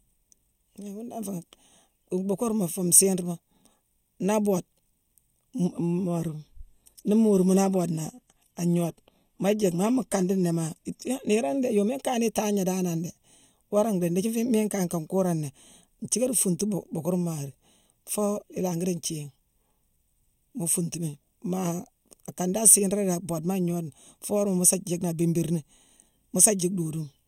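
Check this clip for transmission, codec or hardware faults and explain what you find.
Two faults are present: a comb-filtering colour across the whole speech clip, and a six-second stretch of reduced stream quality.

Channel delay (comb filtering) runs throughout. One channel lags the other by about a third of a millisecond, and summing them to mono cancels shared content at regularly spaced frequencies. The first notch falls around 1.5 kHz, with further notches higher up, so the voice sounds hollow and phasey. On a spectrogram this shows as fixed dark horizontal bands that stay put for the whole clip.

An adaptive stream at a lower bitrate occupies 5.65 to 11.65 s. The switch in quality is abrupt and leaves no gap. It fits a drop from roughly 96 kbit/s AAC to 24 kbit/s HE-AAC. Nothing remains above 16.3 kHz. A spectrogram shows a sudden flat ceiling and patchy, copied-looking high bands. 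The waveform stays continuous.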